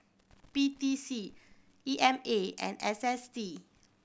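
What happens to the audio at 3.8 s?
Nothing goes wrong at 3.8 s; the speech there plays through intact, with no dropout, click, distortion or other fault.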